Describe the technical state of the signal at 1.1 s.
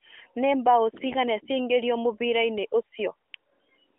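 AMR bit errors hit from 1.06 to 1.15 s, a span that fits about four 20 ms frames. A few percent of the weakly protected bits flipped, so pulse positions and fine pitch and gain values go wrong. The narrowband speech turns briefly hoarse and gargly.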